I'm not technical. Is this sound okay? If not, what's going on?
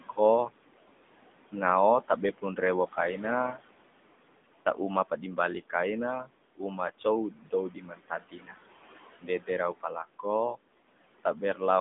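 No, not quite. Two things run through the whole clip.

First, AMR narrowband mobile codec: the speech has been squeezed through an old-style phone codec that keeps only a narrow slice of sound, so it's muffled, cut off at the top, and plainly buzzy and synthetic, like a 2G call.

Second, noise suppressor artifacts: something is trying to strip out the background noise of the room. It pulls that noise down hard in the gaps between phrases and lets it back in under the speech, so the background pumps up and down.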